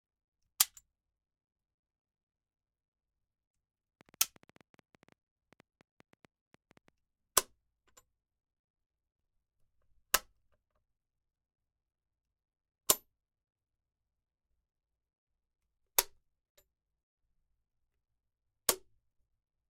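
Something in the signal chain was likely injecting a stream of pulses, whether interference from nearby equipment or a faulty connection or power supply, and from 4.01 to 6.89 s this comes through as a train of clicks. Around 30 similar clicks arrive at an uneven pace, averaging about 8 per second, with peaks standing roughly 5 dB above the surrounding sound. The result is a ticking, popping layer sitting over the audio for those three seconds.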